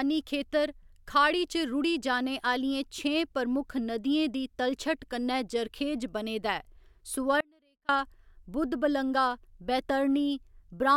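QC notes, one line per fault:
7.41–7.89 s, audio dropout to a faint residue. Speech cuts out abruptly for about 0.48 s, leaving only faint sound roughly 40 dB down. Likely a brief signal loss with the path still live.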